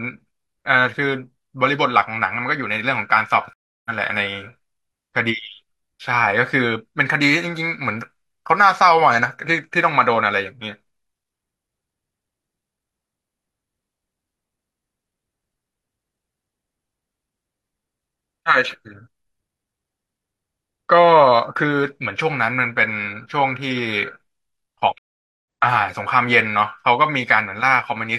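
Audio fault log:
3.53–3.90 s and 24.98–25.45 s, stream reconnect: the connection dropped and the player went silent for about 0.32 s and 0.47 s, then restarted with a new decoder mid-stream. The speech picks up a little later than where it stopped, skipping roughly 0.2 s at the first break and about half a second at the second, so some speech is lost. Each restart fades in from near silence. A spectrogram shows a clean blank band across all frequencies, and the waveform shows a flat gap with no tail.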